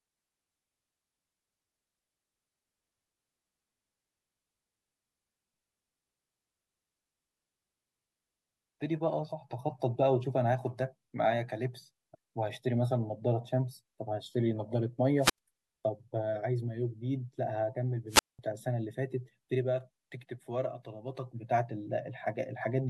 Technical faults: wireless microphone squelch dropout

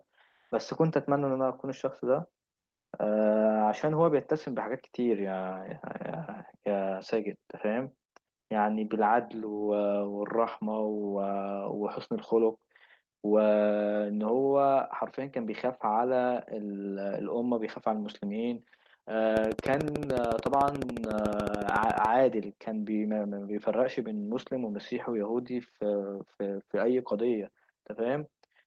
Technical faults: comfort noise in place of the background; train of clicks

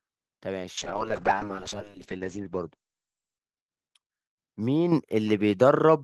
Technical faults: call bitrate drop; microphone volume stepped up

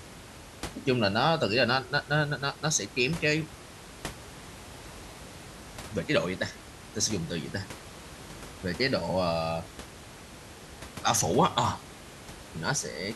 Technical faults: none

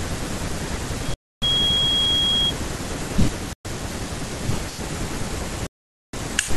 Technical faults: loudspeaker feedback squeal; Bluetooth dropout

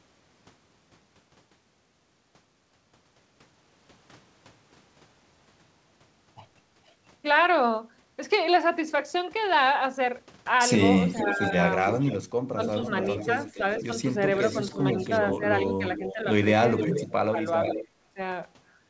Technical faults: echo leak; speech suppressed in double talk

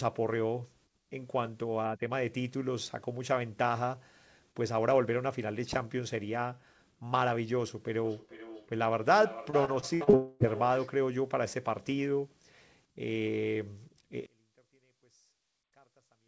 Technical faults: feedback echo between two devices; repeated packet loss (robotic sound); long network dropout; one channel inverted

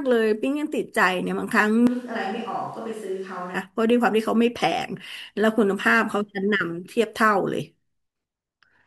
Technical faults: switch to a distant microphone

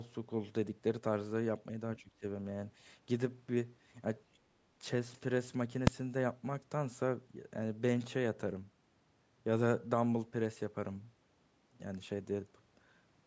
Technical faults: speech suppressed in double talk; other side's voice leaking through; invalid numbers at full scale

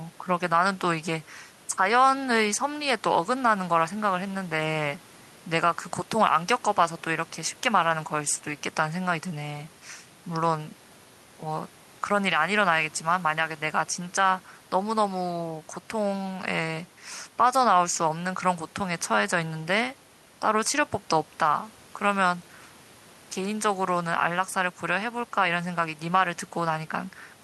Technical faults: none

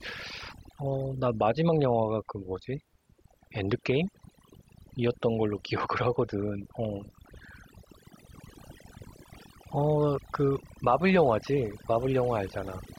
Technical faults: overdone noise removal

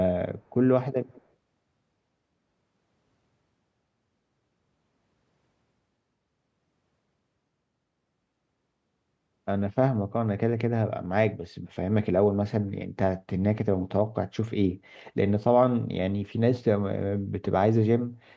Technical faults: echo leak

